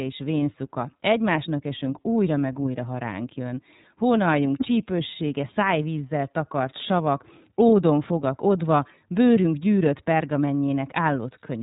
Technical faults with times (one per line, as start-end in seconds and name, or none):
0.00-11.63 iLBC codec